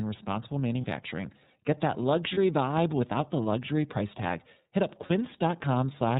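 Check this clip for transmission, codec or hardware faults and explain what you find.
Two kinds of fault are present: narrowband iLBC coding across the whole speech clip, and three brief dropouts where iLBC frames were lost.

iLBC codec, throughout: each frame's excitation is coded independently and nothing above 4 kHz survives, so the speech sounds band-limited, slightly rough and synthetic. The damage is plainly audible, and the character fits the 13.33 kbps mode with 30 ms frames.

Lost iLBC frames, at 0.81, 2.34 and 5.06 s: each gap lasts about 30 ms, just before "vibe without the luxury" in the second case. The decoder fills the gap by repeating the last pitch cycle mixed with noise, giving a short held, buzzy vowel before clean decoding resumes almost immediately.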